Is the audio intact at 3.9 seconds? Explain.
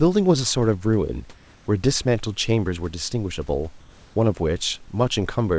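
No. From 3.80 to 4.16 s, about 360 ms, the real room background gets swapped for comfort noise. That's likely discontinuous transmission: during the pause the sender stopped sending audio, and the receiver filled the gap with synthetic noise shaped roughly like the room. You hear the background, sitting about 28 dB under the loud parts, turn smooth and featureless, with its level shifting by about 4 dB until the sound comes back.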